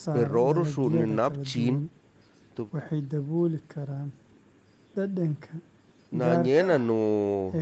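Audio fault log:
No fault found, so the audio fault log for this speech has nothing to record.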